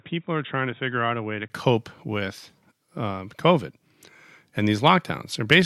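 A speech clip whose first 1.5 s sound dull and boxy, with nothing above 3.8 kHz, a noticeably lower level, and a faint background noise of its own. At 1.5 s a gap of about 20 ms precedes "with um," and the full band returns. This is likely an input switched to a poorer device, a narrower-band microphone or headset profile, before switching back. On a spectrogram, energy stops sharply at 3.8 kHz until the break. The waveform shows smaller amplitude there, then a brief flat gap.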